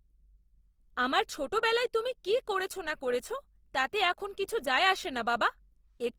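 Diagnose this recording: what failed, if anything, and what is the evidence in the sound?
The fault sits at the codec stage and runs through the whole recording: the speech carries plainly audible Opus compression damage, most likely from encoding in Opus's music (CELT) mode at a rate that fits about 24 kbps. The band stays fullband, with content reaching about 20.4 kHz, but the upper bands come out grainy and rough. Too few bits remain for detail, so those bands are rebuilt from folded lower bands or noise. Unlike MP3, the band energy is kept, so there are few spectral holes and less swirl.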